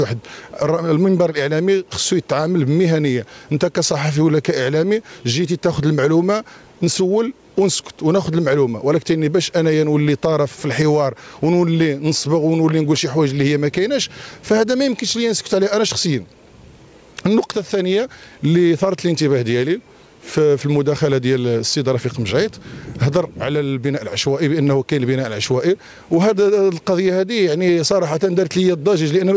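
Listening closely, nothing in the audio stood out as a technical problem at any point.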